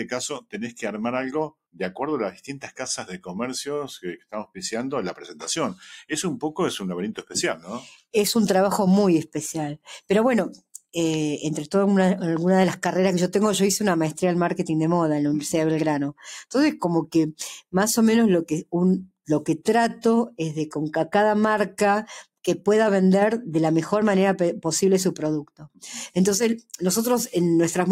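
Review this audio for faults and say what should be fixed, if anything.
A noise suppressor applied to music or sounds runs throughout, treating steady tones and tails as noise. The level pumps by about 5 dB, and the waveform envelope flutters.

Sound cut by the noise suppressor occurs at 4.17–4.58 s, dropping about 16 dB, and at 25.45–25.83 s, dropping about 20 dB. Sustained spectrogram bands darken abruptly there.

Bypass the speech-oriented noise suppressor whenever the source is not speech.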